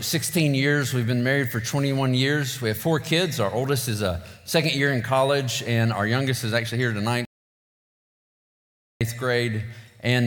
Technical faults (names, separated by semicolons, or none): audio dropout to silence